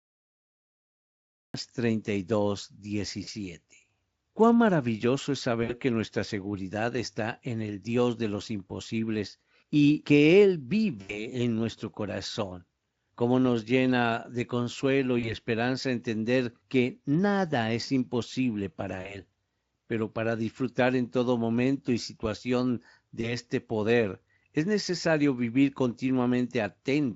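Speech, beginning with a cut-off start: the first 1.54 s are digital silence, and the audio switches on abruptly at 1.54 s partway through a sound, with no natural attack, as if capture or the stream began late. After that, VoIP packet loss concealed by the speech codec appears six times, at 3.23, 5.63, 11.01, 15.19, 19.01 and 23.21 s. The gaps run from 20 to 80 ms, consistent with one to four lost 20 ms frames. The longest are 60 ms at 5.63 s and 80 ms at 11.01 s. At each point the decoder fills the hole by repeating its last pitch and spectral shape at falling gain, giving a short buzzy tone or coloured noise that fades. Because the decoder state has to rebuild, the speech stays thin or distorted briefly after each gap, so the disturbance lasts longer than the loss itself, up to about 0.2 s at 11.01 s. The audio passes through Speex at roughly 28 kbps, which adds only light coding colour.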